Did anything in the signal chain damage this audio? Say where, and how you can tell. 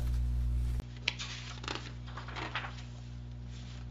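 Yes. At 0.8 s a 20 ms gap precedes duller, about 10 dB quieter audio with nothing above 7.3 kHz and a new background noise roughly 40 dB down, likely an input switched to a poorer device at the driver. A spectrogram shows the upper band abruptly ending after the gap.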